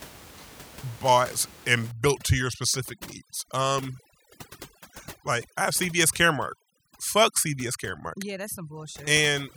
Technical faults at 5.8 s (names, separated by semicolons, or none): overdone noise removal